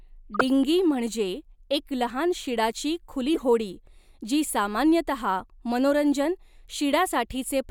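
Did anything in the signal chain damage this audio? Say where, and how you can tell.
Yes. The codec stage decoded corrupt frames at 0.34–0.44 s and 3.34–3.42 s. Flipped bits gave wrong gains and codes over several frames. Short noisy bursts peak around -10 and -15 dBFS, and they show on a spectrogram as bright, misplaced blocks that ignore the speech harmonics.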